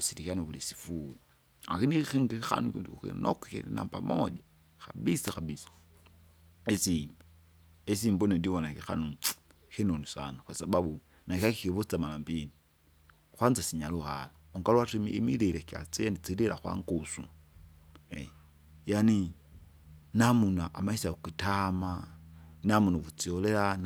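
At 5.23 s and again at 11.35 s the speech is hit by a brief swish of static, about 0.1 s and 0.16 s long: a wireless microphone noise hit, where the analogue FM link fades and receiver hiss rises over the voice. Unlike a digital dropout, the sound is noisy, not silent or cut.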